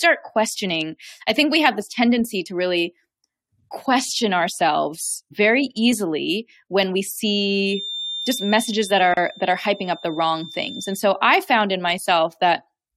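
A feedback whistle runs from 7.58 s to 11.03 s: a thin, steady tone at 3.6 kHz sits behind the speech, around 15 dB below it, swelling and fading slowly in level. The likely cause is a loudspeaker-to-microphone loop held just at the edge of instability. One frequency keeps recirculating at near-unity gain, so it rings on continuously but never builds into a runaway howl.

A gap at a join of encoded pieces falls at 9.14 s, inside the whistle, where the sound drops out for 33 ms before resuming exactly where it left off. The speech was encoded in separate sections and spliced without trimming. The silent priming delay at the start of one section and the padded final frame of the previous one both remain, leaving a short hole with smeared edges.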